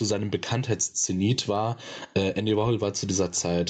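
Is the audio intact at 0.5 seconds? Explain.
No. At 0.5 s the clip is caught in gain pumping, which runs through the whole speech clip. The likely cause is input gain set far too high, with a fast limiter pulling the level down on each loud syllable and letting it back up in the pauses. The level swings by roughly 15 dB, leaving the speech flattened and squashed.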